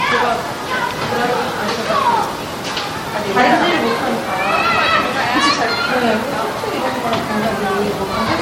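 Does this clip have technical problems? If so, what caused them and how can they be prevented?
Yes. Generation loss runs through the whole clip. The sound is swirly and hollow, with smeared attacks and a watery texture. Nothing is present above 16.5 kHz. The likely cause is lossy re-encoding, with the audio passed through MP3 about three times, at a rate that fits 64 kbit/s. Each pass re-quantises on a shifted frame grid, so noise and spectral gaps pile up. To prevent it, keep a lossless master and encode to MP3 only once, at the final step.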